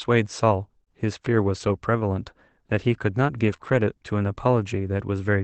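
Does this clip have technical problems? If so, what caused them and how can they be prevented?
Yes, there are three kinds of trouble, all from the network side of the call.

Repeated packet loss (robotic sound) shows up from 0.77 to 0.88 s. Three separate holes land in that tenth of a second, the longest about 18 ms. Each one gets patched by stretching the last bit of sound, so nearly half that stretch is made-up audio. That's why it comes out choppy and a bit robotic. Steadier network routing or a deeper jitter buffer would prevent most of it.

A lost packet rebuilt from error correction happens twice, from 3.48 to 3.54 s and again from 3.60 to 3.74 s. The packets went missing, but the following ones carried low-bitrate backup copies, and the Opus decoder played those instead of leaving gaps. You don't hear dropouts, just a rougher, noisier texture for those moments. Cutting the loss at its source, usually a congested or wireless link, keeps the decoder from needing those copies.

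Short concealed packet loss sits between the two error-correction spots, from 3.56 to 3.60 s. About 20 ms never arrived, and there was no backup copy to fall back on, so the receiver invented a fill from the preceding sound and blended back in. It comes across as a brief smear. A larger jitter buffer or a more reliable connection would let that packet arrive in time. The call itself ran through Opus at a rate that points to about 24 kbps, with the audio band stopping around 8 kHz.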